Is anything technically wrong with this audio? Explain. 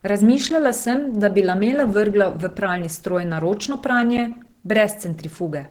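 Yes, there are two problems. Throughout the clip, low-bitrate coding, likely Opus compression, keeps coarse band energies and fills the missing detail with folded or noise-like content. This makes the speech sound hoarse and grainy. The damage is plainly audible, and it fits a hybrid mode at around 16 kbps, even though content reaches 20.3 kHz.

There are also two blocks of digital silence, one at 0.50 s (10 ms, just before "sem da bi lamele") and one at 4.17 s (8 ms, just after "na ročno"). In each, samples were zeroed without any fade. Each is heard as a tick or dip.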